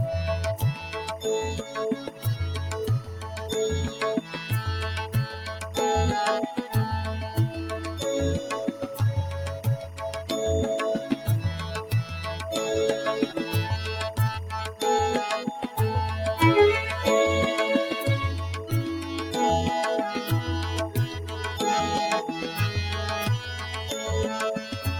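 A steady chirping warble sits behind the audio from start to finish, roughly 20 dB below it: timecode bleed. Linear timecode from a neighbouring track or cable has leaked in, and its square wave flips between tones near 1 kHz and 2 kHz. The chirp repeats at 23.976 frames per second, which fits film-rate code. That square-wave pitch toggling and frame-locked rhythm set it apart from a single steady hum or a random whine.

A noise suppressor built for speech has been applied to music or sounds, and it pumps the whole clip by around 5 dB. It mistakes steady tones, ambience and decay for noise and pulls them down, while onsets pass through. The result is a fluttering, thinning texture. Unlike a compressor, which follows loudness, this gain change follows how stable the sound is, so sustained material sinks even when it isn't loud.

At specific points the sound is cut by the noise suppressor more deeply: at 0.75 to 0.96 s (about 5 dB), 1.62 to 1.77 s (about 7 dB), 1.96 to 2.25 s (about 11 dB), 9.81 to 10.01 s (about 5 dB), 11.13 to 11.28 s (about 6 dB), 11.83 to 12.12 s (about 7 dB) and 20.89 to 21.37 s (about 8 dB). 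Each dip lasts a fraction of a second, and sustained or fading parts collapse early. A dropout, by contrast, would leave silence or a click rather than a shaped sag.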